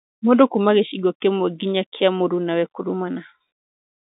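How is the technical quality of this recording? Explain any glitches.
Listening closely, nothing stood out as a glitch or technical problem in this speech recording.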